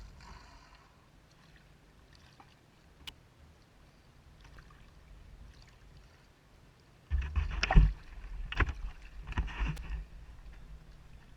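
You'll hear small clicks or skips at 2.58, 4.57, 6.56 and 8.55 s, a steady 2-second rhythm. That's overlap between stream segments: neighbouring 2-second chunks claim the same stretch of time, so the player trims a sliver and the waveform jumps at each seam. There are also two sharp snaps laid over the audio at 3.08 and 9.77 s, each about 12 to 13 milliseconds long. They're most likely an electrical switching spike, a nearby switch or discharge arcing briefly into the line.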